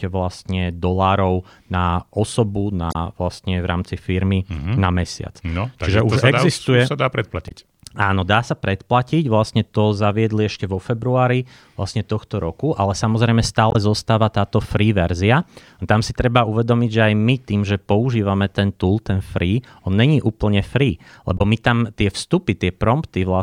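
Damaged data in the compressed stream breaks the speech at 2.91, 7.48, 13.71 and 21.37 s. Corrupt frames throw the decoder out of sync. Each event is brief, about 40–50 ms long.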